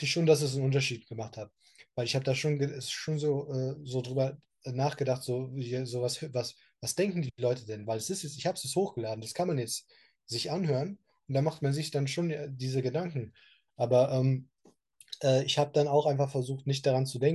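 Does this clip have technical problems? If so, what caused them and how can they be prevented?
No, nothing in this speech recording points to a technical fault, so there is no cause to trace and nothing to prevent.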